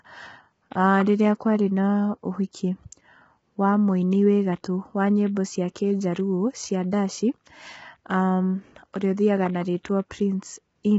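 From start to finish the speech carries heavy damage from low-delay AAC compression, likely AAC-ELD at a bitrate around 16 kbps. Its short frames cannot separate the harmonics cleanly, so the voice sounds rough and grainy, with a hiss filling the gaps between harmonics. On a spectrogram the harmonic stripes look smeared, with speckled noise between them, and all energy stops abruptly at about 7.8 kHz.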